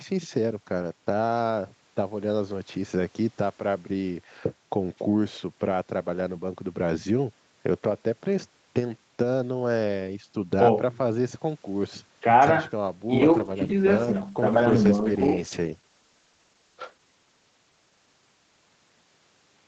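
At 13.08 s a call bitrate drop sets in and lasts to the end at 19.67 s, with the Opus encoder falling from 32 to 10 kbps and holding its lowest rate for about 3.6 s. Speech turns rough and watery, and a spectrogram shows blotchy, smeared harmonics with less fine detail.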